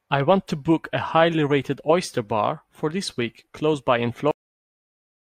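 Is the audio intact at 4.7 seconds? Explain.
No, 4.7 s falls inside a cut-off end. Right after "week close by in", at 4.31 s, the speech stops mid-sound and drops straight to digital silence with no decay through to the end. The final buffers were never written or played back.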